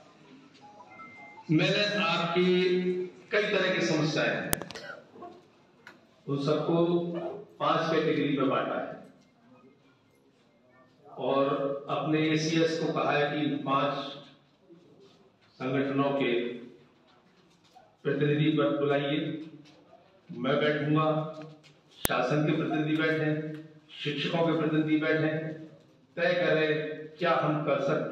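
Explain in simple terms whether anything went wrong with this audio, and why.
Two clicks at 4.53 s and 22.05 s are a file header played as audio: pieces were joined without stripping their headers, so those bytes sounded as a click.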